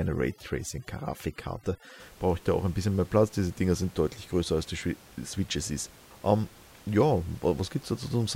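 From 0 to 2.0 s, overdone noise removal: the noise reducer is set too strong, cutting whole frequency bands whenever they sit near its noise estimate, taking quiet parts of the speech with them. The background drops and breaks up into twinkling specks. After that, the room noise sits about 25 dB below the speech.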